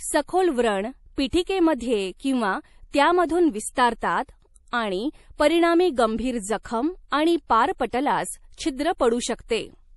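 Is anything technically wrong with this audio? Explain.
Yes. Throughout the speech there is plainly audible codec damage and no content above 11.5 kHz. This is likely MP3 compression at a low bitrate, probably around 48 kbps. Short of bits, the encoder drops weak frequency lines that flicker frame to frame, giving a watery, swirly sound. It also cuts the treble. A plain low-pass filter would remove the treble without that flicker.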